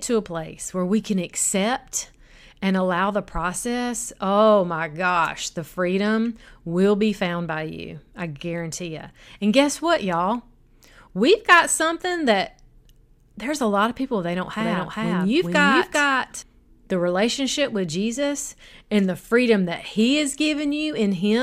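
A second, slower capture path or a misaligned edit likely fed the speech in twice, giving a doubled audio track from 14.60 to 16.42 s, after "of people they don't". A full-level copy trails by about 400 ms, dry and abruptly cut, ending before "the relationship with".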